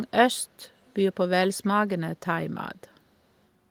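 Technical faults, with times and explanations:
0.85–0.93 s, echo leak: a brief, very faint repeat of the speech surfaces, lagging the original by 426 ms, likely from a far-end loudspeaker whose echo canceller let some microphone pickup through. Unlike room reverberation, it is a distinct delayed copy rather than a smooth decaying tail.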